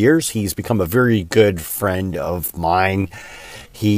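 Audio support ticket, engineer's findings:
Time-stretched section, 1.0 s to end. Speech abruptly slows to about 0.62x pace while pitch holds; audio drags. Likely cause: software stretching the segment to fill a target length, repeating short overlapping pieces to lengthen it without shifting pitch.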